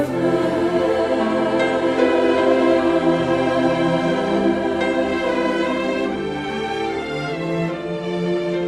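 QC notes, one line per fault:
No faults found; the audio carries a WebRTC call path's coding, with the top end rolling off around 12 kHz, which fits an Opus link.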